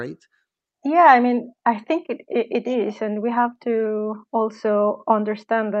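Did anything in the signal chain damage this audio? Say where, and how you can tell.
No, nothing in the chain damaged this speech.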